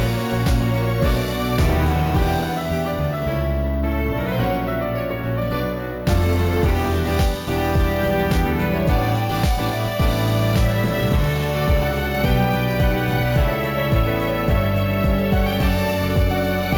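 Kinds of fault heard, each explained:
Imaging from sample-and-hold upsampling: the rate was raised by repeating each sample with no smoothing filter, which fits a 16 kHz source held up to 48 kHz. A bright metallic fizz runs through the clip, about 23 dB below the sound and rising and falling with it. A spectrogram shows the content mirrored into the 8 kHz to 16 kHz band, moving opposite to the original, and a zoomed waveform shows flat staircase steps.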